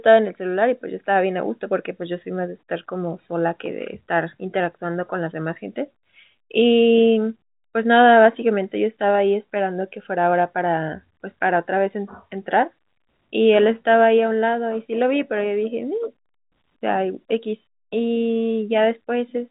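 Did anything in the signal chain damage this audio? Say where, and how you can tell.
No, nothing in the chain damaged it.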